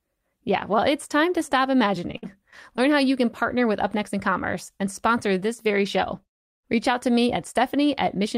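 From 2.11 to 2.79 s, repeated packet loss (robotic sound). Packets kept dropping. Short gaps, the longest about 52 ms, were patched by extending prior sound, making the speech choppy and robotic.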